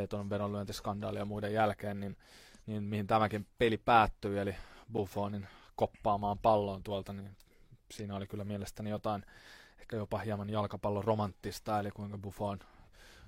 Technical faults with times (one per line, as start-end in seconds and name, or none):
4.97 gap between stream segments
8.98 gap between stream segments